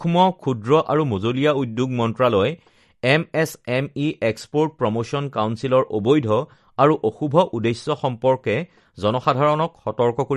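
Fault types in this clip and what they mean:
MP3 compression: likely cause of the plainly audible damage to this speech, which has nothing above 12.5 kHz, with watery, swirling artefacts from bands dropping in and out, consistent with a low bitrate around 48 kbps.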